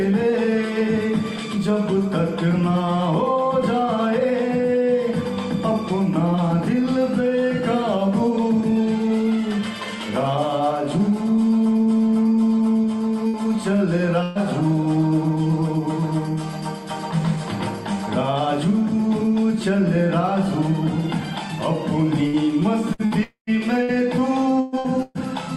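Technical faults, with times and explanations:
13.27–13.36 s and 14.23–14.38 s, burst of packet loss: about 60 ms, then 120 ms, goes missing. Each gap is filled by a fading continuation of the preceding sound.
22.27–25.18 s, repeated packet loss (robotic sound): seven gaps, the longest about 124 ms, cover roughly a fifth of the span. Repeated patching makes the audio choppy and robotic.
23.23–23.50 s, long network dropout: the last sound is held and fades, then about 120 ms of silence follows. This is likely a network dropout, with that audio never arriving.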